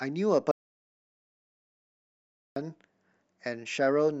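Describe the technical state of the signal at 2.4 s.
At 2.4 s the speech is in an audio dropout to silence running from 0.51 to 2.56 s: silence with no room tone, most likely from lost input while recording continued.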